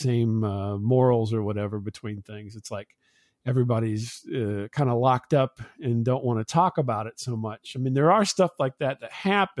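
Nothing in this recording of speech gives a listener any technical fault to point to at any moment.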